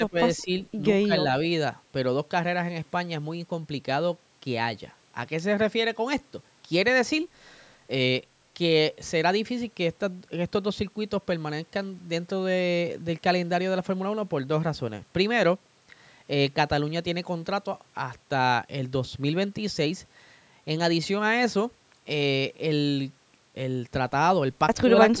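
Brief dips at 0.0–0.16 s, 0.38–0.5 s, 1.05–1.13 s, 24.82–24.9 s and 25.11–25.2 s are likely speech suppressed in double talk, with an echo canceller mistaking the talker for loudspeaker echo. Each cuts the voice by about 10 to 30 dB, and shows as sudden notches in the waveform envelope and fading bands on the spectrogram.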